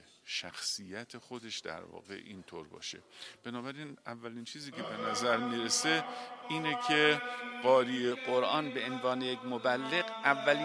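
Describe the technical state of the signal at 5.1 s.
At 5.1 s the signal is affected by a wrong sample rate, a fault that runs from 0.0 s to 8.11 s. The samples are being clocked out slower than they were captured and are never resampled, so duration and pitch shift together. Everything plays at 0.919 times normal speed and sits 1.47 semitones flat, which fits audio recorded at 24 kHz but played back at 22 kHz. The sound is audibly lower and more sluggish.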